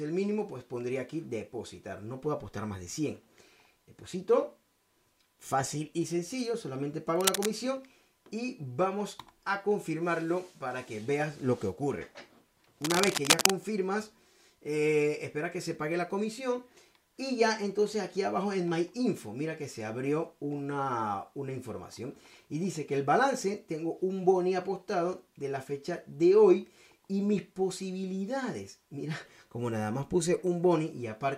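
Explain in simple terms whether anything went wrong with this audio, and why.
Two bursts of cable scratch noise interrupt the audio, at 7.16 to 7.50 s and 12.82 to 13.50 s. They sound like brief scratching or rustling, about as loud as the sound itself, and the second is louder. The likely cause is a worn cable or connector being moved.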